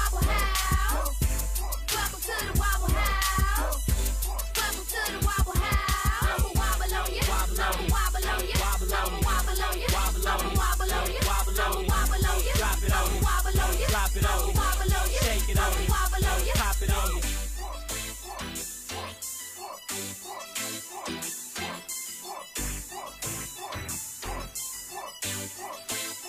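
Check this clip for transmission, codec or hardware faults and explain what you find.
No fault is audible anywhere in the clip.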